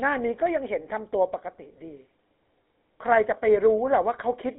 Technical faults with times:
0.00-4.59 GSM full-rate codec
3.51 dropped samples

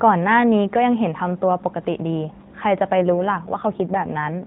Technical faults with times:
2.97-4.46 AMR rate drop

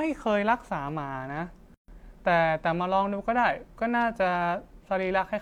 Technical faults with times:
1.74-1.88 gap at a join of encoded pieces

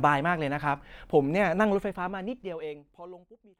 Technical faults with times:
none

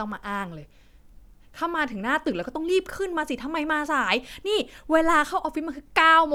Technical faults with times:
none

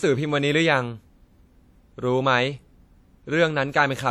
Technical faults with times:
0.00-4.11 low-bitrate audio saved at a high bitrate

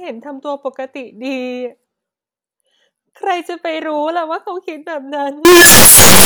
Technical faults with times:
5.45-6.25 signed and unsigned mixed up

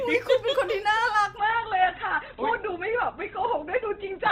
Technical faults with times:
1.38-4.32 adaptive stream at a lower bitrate

